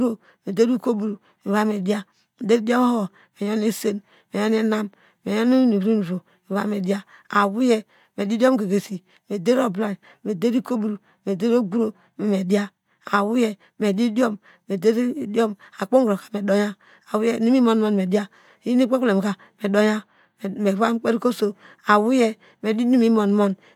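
No technical faults can be heard anywhere in this speech recording. There is nothing in the audio that calls for a timestamp or a note.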